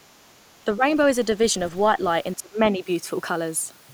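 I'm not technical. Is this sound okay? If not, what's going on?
No, not quite. The speech dips twice: briefly and a little from 0.65 to 0.84 s, then much more deeply from 2.36 to 2.85 s, where it drops sharply for most of that half second. This is most likely speech suppressed in double talk. When both ends of a call talk at once, the echo canceller can't tell this person's voice from the echo of the other side, so it turns everything down for a moment.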